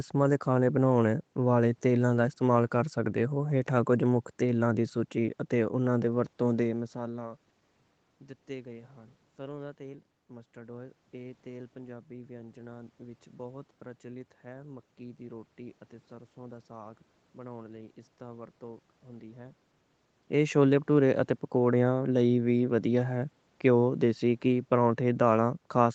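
No technical faults are audible in this speech: the band stops at about 8 kHz, which fits a call codec running at reduced bandwidth, the room's background noise stays in the recording, and the level shifts near 6.5 s and 19.5 s come from the talker moving relative to the microphone.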